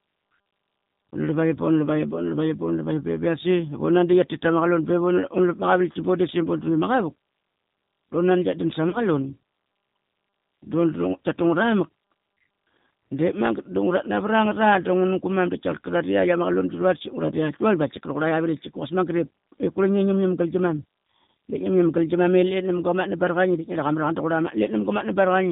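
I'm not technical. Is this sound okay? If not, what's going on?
No. The whole recording went through the G.729 codec, a phone-call format that squeezes speech hard. It throws away everything above 4 kHz and rebuilds the voice from a rough model. So the speech sounds muffled, slightly rough and a bit synthetic from start to finish.

At 8.90 to 9.00 s, just after "nan tkia dan", there is VoIP packet loss concealed by the speech codec. About 30 ms of sound never arrived. The decoder filled the gap by stretching the last sound into a fading buzzy tone or coloured noise. The voice then stays weak or distorted briefly.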